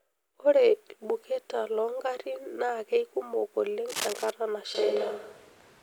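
Cable scratch noise runs from 3.88 to 4.31 s: a dense, irregular burst of scratching and rustling lies over the speech, roughly 10 dB below it. The likely cause is a worn cable, connector or control being moved, so its contact resistance jumps about rapidly and injects uneven crackle into the signal for those few tenths of a second before clearing.

A switch to a distant microphone comes at 4.75 s and lasts to the end. The speech abruptly turns roomy and hollow and loses low end, though its overall level stays about the same. Background noise sits roughly 30 dB under the speech. The sudden change points to the close microphone likely failing or being dropped, leaving a pickup further from the speaker, such as a camera's.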